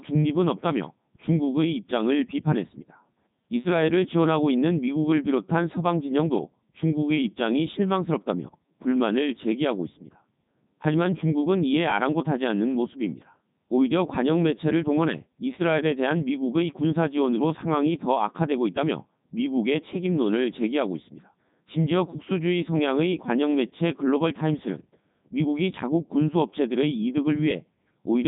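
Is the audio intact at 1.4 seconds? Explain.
No. At 1.4 seconds, as throughout the clip, the speech passes through a Codec 2 vocoder, which fits its 3.2 kbit/s mode. The voice is rebuilt from sine waves using only pitch, voicing and envelope, so it sounds robotic and buzzy with nothing above 3.9 kHz, unlike plain band-limiting, which keeps a natural timbre.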